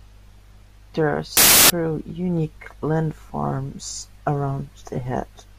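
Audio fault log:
1.37–1.70 s, samples built from the wrong bytes: the speech gives way to a burst of loud, harsh broadband noise for about a third of a second. Each sample's bytes are combined wrongly, so the rapidly fluctuating low-order bits end up dominating every value.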